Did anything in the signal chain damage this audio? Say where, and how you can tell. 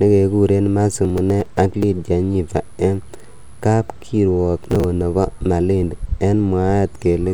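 Yes, processor overload crackle at the driver or buffer stage, in two bursts of gritty tearing from 1.05 to 1.83 s and from 4.58 to 4.84 s. Within each burst, many short pieces of audio are skipped with hard edges at a spacing that fits buffers of around 10 ms, so the processor was missing deadlines one after another. A single network dropout would leave one clean hole, and clipping would follow loudness rather than stopping abruptly when the load eased.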